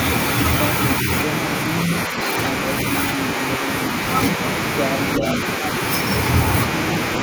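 From 2.07 to 2.19 s the speech briefly sags by about 5 dB. This is likely speech suppressed in double talk: the echo canceller turned the talker down while the other side was also speaking. From 5.16 to 5.23 s a scrap of the voice returns 383 ms late, about 5 dB below the speech. This is likely an echo leak, where sound from a loudspeaker reached the far microphone and got past cancellation. Overlapping it, from 5.19 to 5.25 s, the speech dips again by about 5 dB, likely from the same double-talk suppression.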